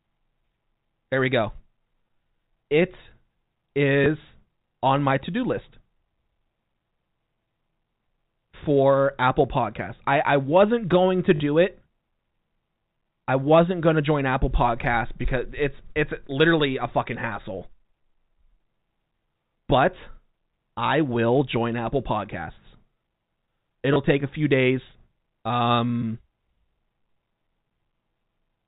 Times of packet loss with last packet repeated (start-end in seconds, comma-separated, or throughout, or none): 4.04, 11.36-11.40, 23.94